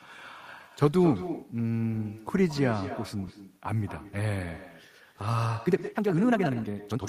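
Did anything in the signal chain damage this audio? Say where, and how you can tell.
Yes. Echo with no canceller sits in the call processing stage and runs through the whole clip: each stretch of speech is followed about a fifth of a second later by a copy roughly 12 dB lower. The far end's loudspeaker feeds its microphone uncancelled. On a spectrogram, every syllable's pattern repeats, weaker, just behind itself.

The time-stretched section runs from 5.45 s to the end at 7.08 s, where the speech suddenly moves at twice the pace while the pitch stays put. The likely cause is stretching software in storage or editing that repeats or drops short pieces. On the waveform the syllable envelopes pack closer together, while spectrogram harmonic spacing is unchanged.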